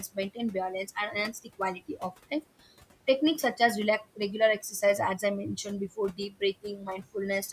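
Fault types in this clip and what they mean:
Noise suppressor artifacts: Throughout the clip the suppressor pulls down the bands it judges to be steady noise, by about 17 dB, so the room noise (sitting about 19 dB under the speech) dips in the gaps and swells back beneath each phrase. On a spectrogram the background floor looks patchy and blotchy, darkening between utterances and filling in under them. The waveform's quiet stretches pump rather than holding level.
Speech cut by the noise suppressor: From 5.96 to 6.42 s and again from 6.63 to 7.15 s, the suppressor treats parts of the speech as noise and turns them down with the background, by about 13 dB and about 10 dB at worst. Only a short portion of each span is hit, roughly a tenth of a second, so soft consonants or endings sound swallowed. A spectrogram shows speech energy briefly fading into the floor, and the waveform's envelope sags unexpectedly.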